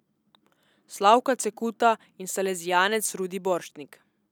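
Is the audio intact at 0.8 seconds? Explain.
Yes, the audio is intact at 0.8 seconds, with no audible fault at that moment.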